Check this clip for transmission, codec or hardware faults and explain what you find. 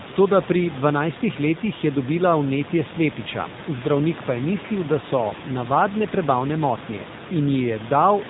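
One codec fault runs through the whole clip: the speech has passed through the AMR narrowband mobile codec, at a bitrate that fits 7.4 kbps. The coder rebuilds speech from a vocal-tract model and sparse pulses, so nothing survives above 4 kHz and the voice sounds plainly buzzy and synthetic. The buzz sets it apart from a simple low-pass filter, which only dulls the sound, and the room noise, about 16 dB below the speech, turns into a swirling warble.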